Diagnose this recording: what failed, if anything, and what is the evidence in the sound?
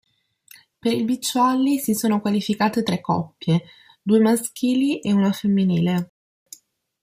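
Playback-stage rebuffering stall: the speech drops to silence from 6.10 to 6.46 s, then resumes where it stopped, adding 0.37 s while the player awaited data.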